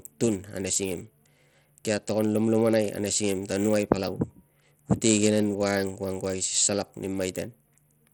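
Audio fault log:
Throughout: Bluetooth SBC compression. The speech sounds dull, and its top end flickers in and out. A gritty grain sits on the sound, with aliasing. This is likely SBC coding at a small bit pool. The top sub-bands get few or no bits, so treble vanishes or stutters. The remaining bands are quantised coarsely, which adds the grit. The damage is plainly audible and fits a bitrate near 80 kbps.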